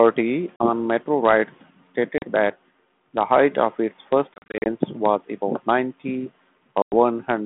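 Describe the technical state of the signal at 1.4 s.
At 1.4 s the speech is intact, with no dropout, click or distortion, only the narrow telephone band of the 32 kbit/s G.726 ADPCM line, which stops short of about 3.5 kHz.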